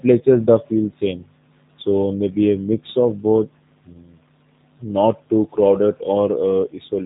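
From start to finish the speech carries G.729 codec damage, plainly audible as a rough, slightly synthetic texture. The sound is rebuilt from a vocal tract filter, a pitch predictor and a few pulses per short frame, which fits an 8 kbit/s G.729A stream. Nothing passes above 3.8 kHz, so the audio sounds narrow and muffled. On a spectrogram the energy stops at a flat ceiling near 3.8 kHz, with blurred, grainy harmonics beneath.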